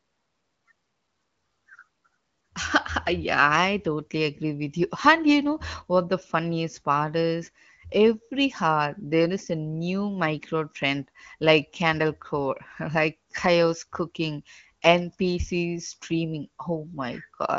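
No audible technical faults.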